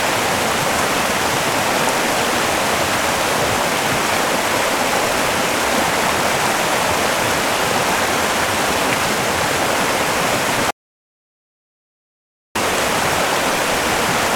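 At 10.71 s an audio dropout to silence cuts the sound dead until 12.55 s, likely a lost input, leaving a flat waveform and blank spectrogram without room tone.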